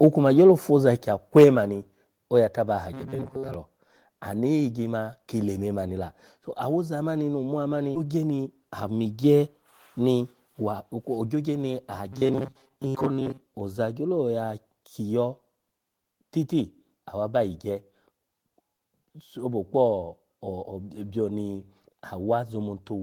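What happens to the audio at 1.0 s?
Microphone volume stepped down at 1.02 s: speech and background fall abruptly by about 5 dB, likely the call software cutting the input volume in one step.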